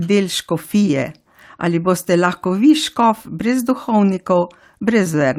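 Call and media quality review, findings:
Nothing to flag on this one; the speech comes through without any dropouts, glitches or level problems worth a ticket.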